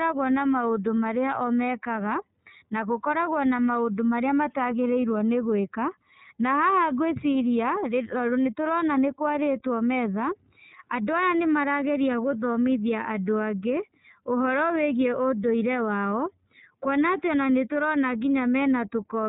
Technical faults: iLBC codec

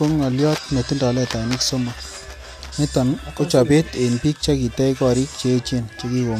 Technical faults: none

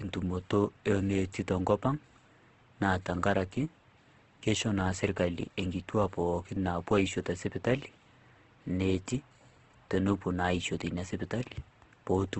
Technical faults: Opus compression

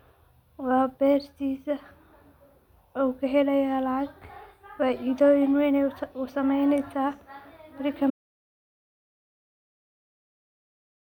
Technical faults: audio dropout to silence

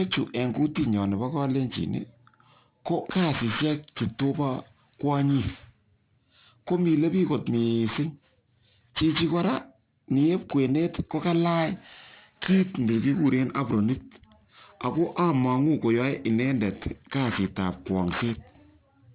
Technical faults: aliasing

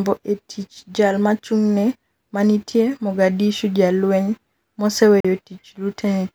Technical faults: Bluetooth dropout

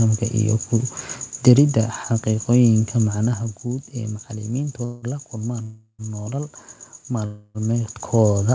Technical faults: zipper noise; call audio freeze

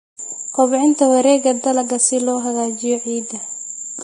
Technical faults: Vorbis compression

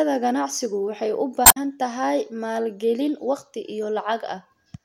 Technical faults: damaged data in a compressed stream

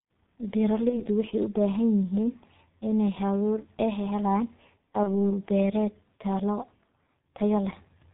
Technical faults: G.723.1 codec; VoIP packet loss concealed by the speech codec

